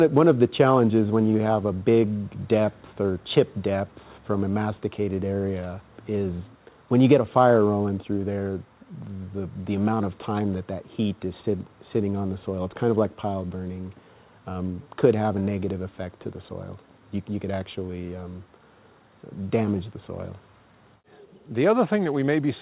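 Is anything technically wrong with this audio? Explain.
No, nothing technically wrong can be heard here.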